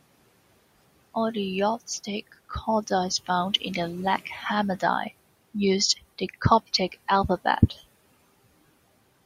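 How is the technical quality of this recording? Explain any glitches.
The main problem is noise suppressor artifacts, and they run through the whole clip. The suppressor estimates the steady background in each frequency band and pulls those bands down frame by frame, here by about 20 dB. The room noise, which sits about 19 dB below the speech, drops away between phrases and climbs back in underneath them.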